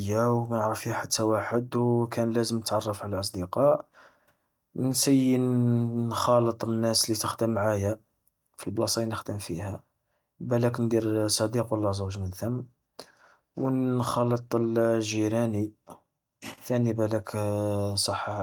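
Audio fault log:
Nothing wrong turns up anywhere in this bit of speech, so there's nothing to log here.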